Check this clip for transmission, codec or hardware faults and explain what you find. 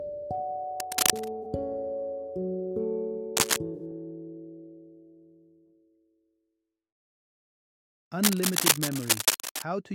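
There's some hardware and codec damage here: three stretches of scratching and two brief concealed corrupt frames.

Cable scratch noise runs from 0.80 to 1.28 s, 3.36 to 3.57 s and 8.23 to 9.63 s. It's a ragged, rustling burst riding above the sound, around 5 dB louder in the first and last stretches and nearer 10 dB in the middle one. It's likely a worn cable or connector being moved, with contact resistance jittering rapidly.

Corrupt frame concealed shows up at 1.42 to 1.45 s and 3.74 to 3.80 s. The decoder caught damaged data and masked it, and the lengths fit one and two frames.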